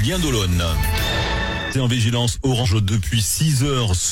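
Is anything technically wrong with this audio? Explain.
Yes. Damaged data in a compressed stream occurs at 1.68 to 1.75 s and 2.60 to 2.66 s: corrupted bytes make the decoder misread frames, lose sync and hunt for the next frame header, producing two short glitches of roughly 60 to 70 ms.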